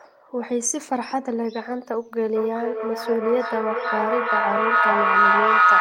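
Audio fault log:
2.35 to 5.81 s, feedback howl: a loop from microphone to loudspeaker and back gains level on each pass, so the repeats, coming about every 400 ms, grow instead of dying away, narrowing to a tone of roughly 1.5 kHz that peaks about 8 dB above the speech.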